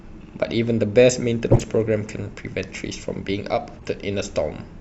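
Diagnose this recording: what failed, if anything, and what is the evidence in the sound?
The codec stage failed: a corrupt frame was decoded twice, as a loud error at 1.51–1.62 s and a faint one at 3.79–3.87 s. Each spans a handful of frames. Flipped bits misplaced spectral energy; unlike packet loss, the decoder played the damaged frames anyway.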